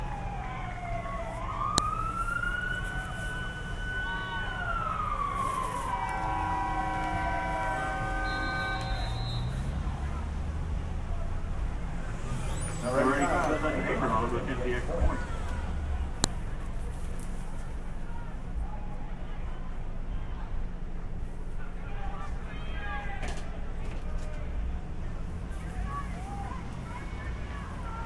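At 1.78 s and again at 16.24 s there's a sharp, loud snap that ignores whatever the sound is doing. That's a file header played as audio: joined WAV pieces kept their headers, so a few dozen bytes of header data got played as samples.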